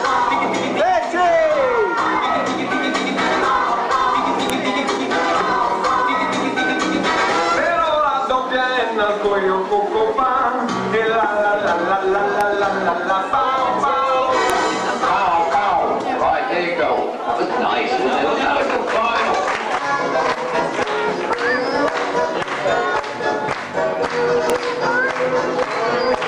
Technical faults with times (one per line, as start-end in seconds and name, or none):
4.50 file header played as audio
14.50 file header played as audio
24.50 file header played as audio